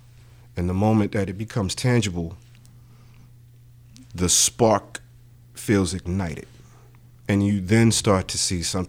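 No technical faults can be heard in the recording.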